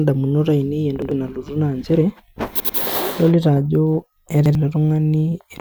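Three times, new audio failed to reach the playback device in time, so it replayed its last buffer, a repeated buffer fault. Each repeat is about 93 ms long, which fits a 4096-sample buffer. At 1.02 s and 4.46 s one piece of speech plays twice, each costing roughly a tenth of a second. At 2.60 s it sounds three times, losing about a fifth of a second. Every repeat is a stutter with a hard join.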